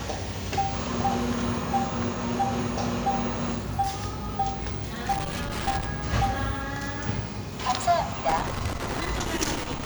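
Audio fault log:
5.12 to 5.85 s and 8.29 s to the end: loose connector crackle. A worn contact keeps breaking the signal. The sound is chopped into irregular scratchy bursts.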